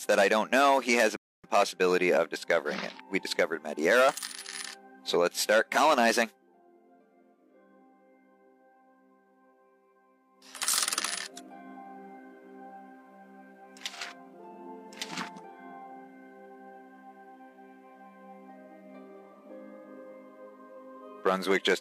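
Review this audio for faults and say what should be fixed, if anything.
There's a rebuffering stall from 1.16 to 1.44 s: the sound drops to silence for about 0.27 s, then picks up exactly where it left off. The player ran dry of downloaded audio and waited for more, so nothing's lost, just time added. A bigger startup buffer or adaptive bitrate switching should keep playback from starving like that.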